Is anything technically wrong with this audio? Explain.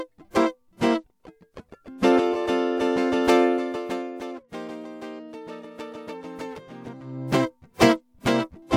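No, nothing in this music stood out as a technical problem on listening.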